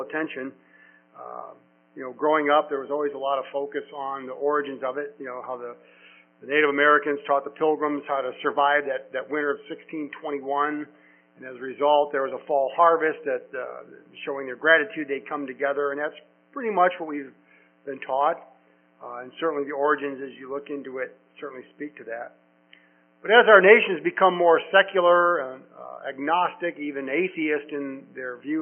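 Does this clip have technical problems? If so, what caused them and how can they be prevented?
No, there are no technical problems to point to in this clip. Since nothing went wrong, there is nothing here that calls for prevention.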